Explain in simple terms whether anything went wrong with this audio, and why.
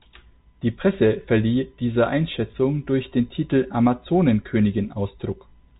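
Nothing went wrong that I could hear in this speech recording; it sounds like an ordinary telephone line, which naturally cuts off the highest sounds, and nothing stood out as a problem.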